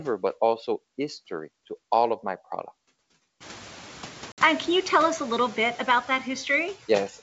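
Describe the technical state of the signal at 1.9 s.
At 1.9 s a noise suppressor is running, as it does throughout the clip. Frame by frame it judges which frequency bands hold steady background noise and pulls them down by about 9 dB. Those decisions keep shifting, so the residual noise dips in the gaps between words and swells back under the speech, while the wideband G.722 coding beneath adds at most a faint trace of its own.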